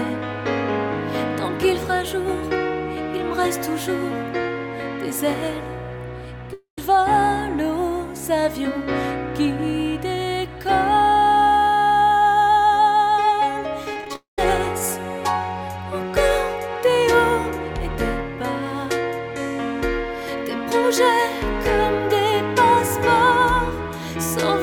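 At 6.53 s the sound breaks off for about a quarter of a second, until 6.78 s. The last bit of audio gets stretched into a fading buzz, which then drops to silence for roughly the final 120 ms before things resume a bit further along, with around 240 ms simply gone. That's the signature of a long network dropout, most likely a run of packets that never arrived at the receiver.

From 13.93 to 14.16 s you get repeated packet loss with that robotic sound. Around five short holes, the longest about 20 ms, are each patched by repeating the previous sound, so over a quarter of that stretch is filler. It comes across as choppy, with pieces missing. It then runs straight into a second long network dropout from 14.16 to 14.39 s: a brief fading fill, then about 140 ms of silence, and roughly 220 ms of audio never comes back.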